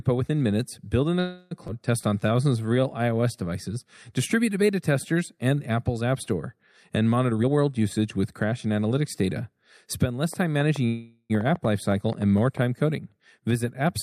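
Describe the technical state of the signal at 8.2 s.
At 8.2 s the receiver is partway through a jitter buffer speed-up (7.25 to 8.82 s). With more audio queued than it wants, it repeatedly cuts pitch-period-sized slices, shedding roughly 0.3 s. The speech runs at 119% speed with unchanged pitch and sounds hurried.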